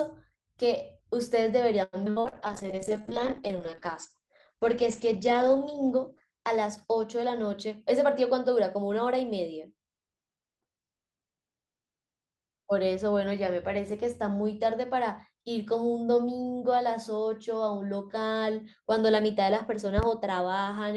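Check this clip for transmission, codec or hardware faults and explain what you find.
Five faults stand out in this speech recording, all but the last bunched into its first nine seconds.

From 1.83 to 2.35 s there is repeated packet loss, producing a robotic sound. Packets went missing or arrived too late five times in quick succession, the longest hole about 95 ms. The receiver covered each hole by extending the last received sound, so nearly half of this half-second is synthetic continuation. The result is choppy, robotic speech with fragments dropped out.

A call bitrate drop runs from 2.27 to 7.28 s. The bandwidth estimate collapsed, and the encoder fell from 32 kbps to 9 kbps, staying at the lowest rate for about 3.4 s. At that rate Opus quantises coarsely and narrows its audio band from 20 kHz to 8 kHz. The speech turns muffled and rough, with a watery texture, until the bitrate climbs back.

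Between 2.47 and 3.15 s comes a jitter buffer slow-down. With its reserve running short, the receiver repeated individual pitch periods and slices of pauses over and over, adding about 58 ms of audio. Playback drops to roughly 92% speed while the pitch stays put, so syllables sound stretched and slightly drawn out across those 0.7 s.

A jitter buffer speed-up follows from 7.51 to 9.13 s. The buffer had built up more audio than its target, so the receiver trimmed short chunks of one or a few pitch periods again and again, removing about a tenth of a second in total. The speech runs at about 106% speed with unchanged pitch and comes across as slightly hurried.

Near the end, between 19.98 and 20.06 s, a loud pop appears as two sharp clicks in quick succession, peaking around 15 dB above the speech, which continues underneath. A sudden voltage step or spike, likely from a plug, switch, static discharge or driver glitch, entered the signal path, and the circuitry after it shaped that impulse into a brief double thump.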